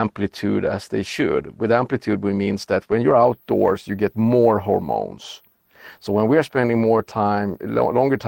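No technical faults can be heard anywhere in the recording.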